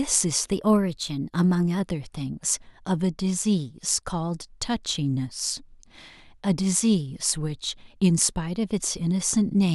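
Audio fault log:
0.52–1.80 s, drift correction step: the speech suddenly runs 5.6% fast and sits 94 cents sharp, nearly a semitone, then snaps back. Likely a clock-matching resampler jumping its rate in one go to rebalance its buffer, so speed and pitch shift together.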